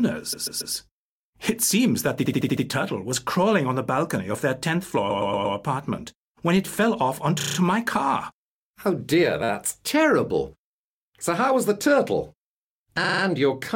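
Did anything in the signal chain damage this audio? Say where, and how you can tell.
Yes, at the codec or storage stage. There are repeated frames at 0.32 to 0.74 s, 2.24 to 2.63 s, 5.09 to 5.56 s, 7.39 to 7.56 s, 9.44 to 9.49 s and 13.03 to 13.22 s. Each is a stutter. A short block, from about 9 to 139 ms, plays three to six extra times in a row. A run of compressed frames was written or sent more than once, and the decoder played it again. Each event adds up to about 0.46 s to the audio.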